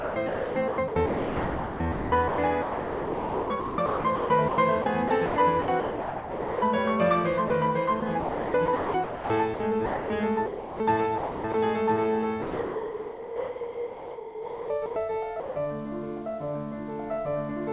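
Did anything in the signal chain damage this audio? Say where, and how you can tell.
Yes. The music repeatedly cuts out to a synthetic hiss over 0.00–6.62 s, 7.48–11.54 s and 12.42–15.56 s, likely sound chopped by the voice detector in call processing, which substitutes comfort noise.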